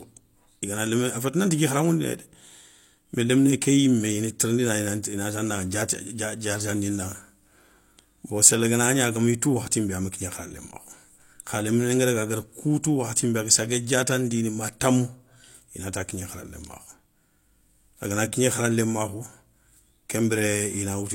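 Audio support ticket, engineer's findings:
Pre-echo at 12.83 s in the speech. Brief hiss, about 11 ms, just ahead of a sharp onset; attack sounds softened, smeared. Probable component: transform codec. Mechanism: onset falls late in a coding block; quantisation noise, sized for the loud attack, spreads across the block into the quiet stretch before it.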